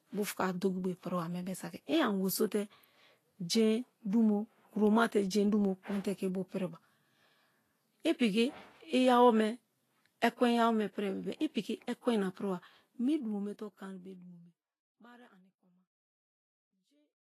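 From start to finish the speech carries plainly audible codec damage, likely from Vorbis compression at a low setting, which fits a bitrate around 31 kbps. Nothing comes through above 14.2 kHz, and the treble that remains is quantised so coarsely that fine detail turns into grainy, hiss-like noise sitting on a smooth spectral floor, with roughened tones and smeared consonant attacks. The gentle fade-out from about 13 s to 17.3 s carries the same texture down with it.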